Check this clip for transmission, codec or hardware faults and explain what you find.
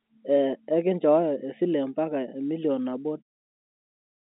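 Nothing faulty found: the speech sits in an ordinary telephone band of about 250 Hz to 3.7 kHz, consistent with G.711 A-law line coding, and the gentle fade-out from around 3 s to 3.23 s is an editor's fade rather than a dropout.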